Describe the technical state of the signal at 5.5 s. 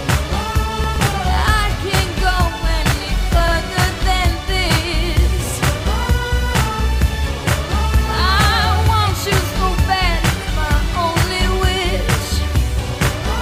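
At 5.5 s the audio is intact, with no dropout, distortion or other technical fault at that moment.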